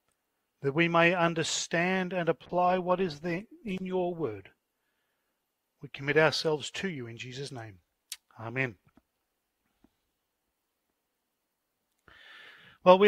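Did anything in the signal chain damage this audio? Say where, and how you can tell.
Yes: a call bitrate drop from 2.47 s to 7.49 s, at the network and codec stage. The sound turns coarse, watery and muffled as the top end disappears, bottoming out for about 2 s before detail returns. When the call's bandwidth estimate fell, the encoder was starved of bits and had to quantise more crudely and discard high frequencies. The damage suggests a fall from around 96 kbps to about 16 kbps, recovering once bandwidth came back.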